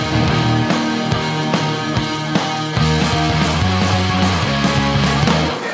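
Nothing stood out on listening, and the audio stops at about 8 kHz, as expected for a wideband call path.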